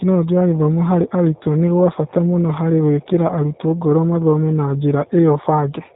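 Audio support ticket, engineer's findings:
G.729 codec damage, full clip. Speech band-limited, nothing above 4 kHz; spectrogram shows hard ceiling there. Rough, synthetic timbre from 8 kbit/s model-based rebuild: vocal tract filter, pitch predictor, sparse pulses per 5 ms subframe. Harmonics look smeared, plainly audible.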